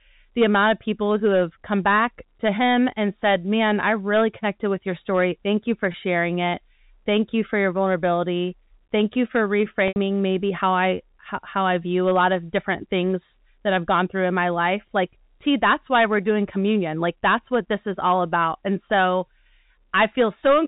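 Packet loss with pitch repetition at 5.92–5.94 s after "you for" and 9.88–9.96 s before "maybe how I how". The 20 ms gap is filled by a looped pitch period, heard as a buzz and seen as frozen, repeating harmonic stripes; in the 80 ms gap the repeated period fades into silence, and speech returns with a short cross-fade.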